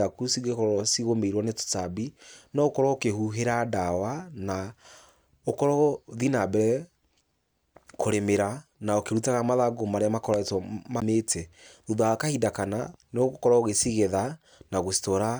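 A CD skip occurs at 11.00 s in the speech. The player's laser was knocked off its track, or thrown by a flaw on the disc, and landed on a different turn of the spiral track. The player mutes for roughly 15 ms while it recovers, heard as a short tick, and the speech then resumes from a different point on the disc rather than continuing where it broke off, so a small section is displaced.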